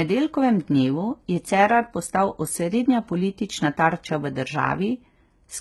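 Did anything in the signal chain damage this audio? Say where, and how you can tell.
Yes. Throughout the speech the sibilants sound gritty and metallic, and the treble is synthetic, with nothing above 15.9 kHz. The codec stage is the likely cause: heavy HE-AAC compression, consistent with a bitrate near 16 kbps, rebuilding the upper band from copied lower harmonics.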